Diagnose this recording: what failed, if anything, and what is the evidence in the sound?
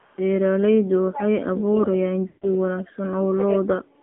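The codec stage is the first problem. The speech went through an AMR narrowband mobile codec at a low rate, which fits the 7.4 kbps mode. The whole clip is confined to roughly 150 Hz to 3.6 kHz, with nothing above that. The codec damage is plainly audible: voicing has a buzzy, synthetic edge, because a vocal-tract model excited by a few sparse pulses is rebuilding the speech rather than the original waveform being carried.

In call processing, an echo leak is most likely behind a faint delayed copy of the sound from 0.00 to 0.19 s. It trails the original by about 320 ms and sits very low, roughly 35 dB below the speech. A far-end loudspeaker's output reached its microphone, and the echo canceller let this residue slip through and sent it back down the line.

The echo canceller also produced speech suppressed in double talk, which is the likely cause of the dips from 1.11 to 3.48 s and again from 3.65 s to the end. 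Within the first span, about a second and a half of speech is pulled down, by up to roughly 25 dB at the deepest. Around a third of a second is affected in the second span. With both sides talking, the canceller could not separate near speech from echo and attenuated both.

On the radio link, lost AMR speech frames cause a gap from 2.28 to 2.49 s, with 140 ms of speech missing, which fits a run of about seven frames. Over that stretch the decoder repeats its last good pitch and spectral settings with falling gain. The sound smears into a drawn-out tone that fades toward silence, then returns weak and rough as the decoder resynchronises.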